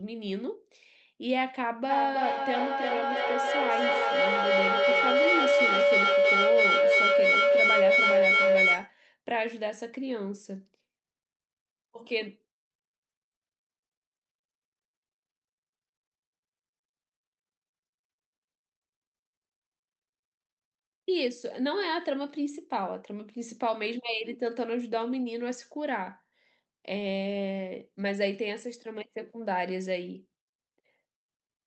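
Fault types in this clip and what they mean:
Feedback howl: two devices in one room shared the call, so the loudspeaker-to-microphone loop gained level each trip. From 1.89 to 8.96 s the repeats swell into a tone around 500 Hz, pulsing roughly every third of a second, peaking about 8 dB above the speech.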